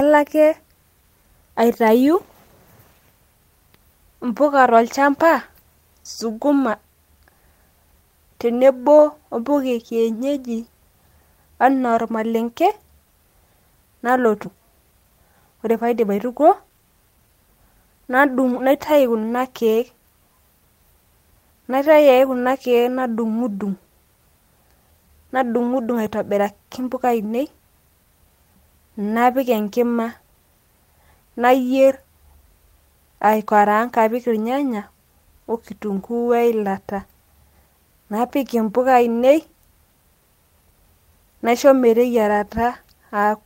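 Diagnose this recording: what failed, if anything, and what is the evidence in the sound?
A skip ahead occurs at the network and jitter-buffer stage, at about 14.45 to 14.56 s. The speech jumps forward with no gap and no fill, so the sounds on either side of the jump are joined almost directly, and roughly 0.7 s of the utterance never plays. The mechanism is a discarded run of audio: the receive buffer overflowed while later audio was already queued, or that stretch was lost on the path. Playback then resumed from the newer data, cutting the latency by about the same 0.7 s.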